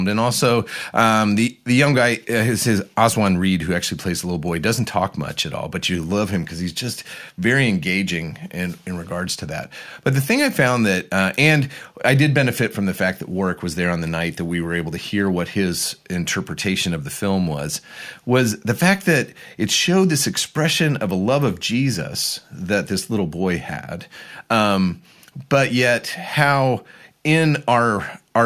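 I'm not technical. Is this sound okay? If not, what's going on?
Yes, this sound is okay, and nothing is going wrong in it.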